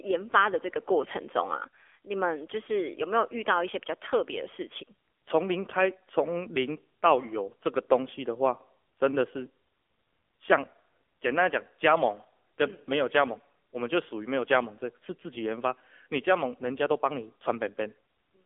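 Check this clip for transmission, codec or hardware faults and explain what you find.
One codec fault runs through the whole speech clip: AMR narrowband mobile codec compression. The speech is confined to a 300 Hz to 3.4 kHz phone band and rebuilt from a pulse-driven vocal-tract model at a low mode, likely around 7.4 kbps, giving plainly audible buzzy, synthetic speech. A spectrogram shows a hard ceiling with nothing above 4 kHz and smeared, blocky harmonics.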